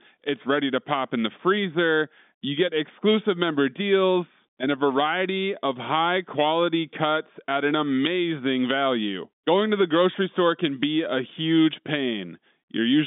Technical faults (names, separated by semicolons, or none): none